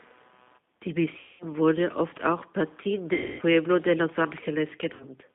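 Speech carrying computer activity noise throughout: a faint buzz pulsing at around 150 Hz, roughly 35 dB below the speech, seen as thin evenly spaced vertical striations on a spectrogram. The G.729 codec damage is plainly audible as a rough, synthetic quality. The spectrogram shows a band from 200 Hz to 3.6 kHz with blurred harmonics, which fits G.729 at 8 kbit/s. VoIP packet loss concealed by the speech codec occurs at 1.19–1.45 s (210 ms), 3.13–3.42 s (260 ms) and 4.94–5.05 s (60 ms). In each gap the decoder extrapolates from its last pitch and filter into a buzzy tone or coloured noise that fades, appearing as smeared, unchanging spectra over a decaying waveform envelope.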